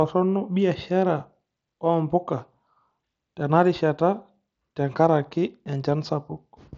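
Speech clip with no technical faults, carried over the Bluetooth mSBC headset codec, whose wideband limit leaves nothing audible above about 7.7 kHz.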